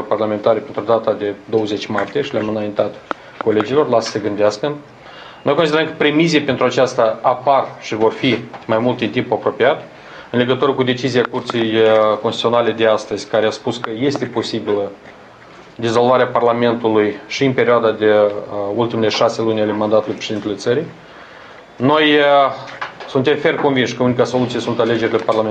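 Timecode bleed runs through the whole clip. Linear timecode from a nearby track or cable has leaked into the audio. Its square wave flips between tones near 1 and 2 kHz, a faint chirping warble far below the sound. The rhythm points to 24-frame code.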